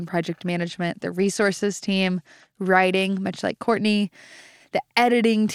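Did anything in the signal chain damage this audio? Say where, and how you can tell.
Yes, at the codec stage, over the Bluetooth link. From 0.46 s to 3.82 s the speech turns dull and gritty, then clears. This is a Bluetooth SBC bit pool drop. Congestion starved the encoder, which points to a bit pool falling to about 13 at around 100 kbps. Top sub-bands lost their bits, and the rest were coarsely quantised.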